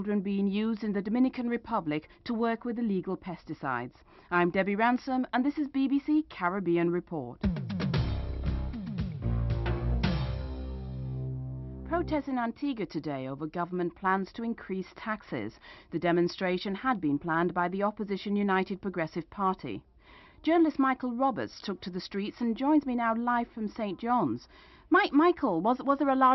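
No technical faults can be heard anywhere in the signal, which stays steady and intact throughout.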